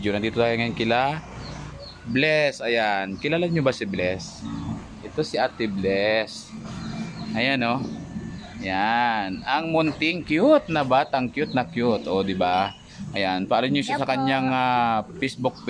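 No technical fault can be heard anywhere in this audio. Nothing in it calls for a fix.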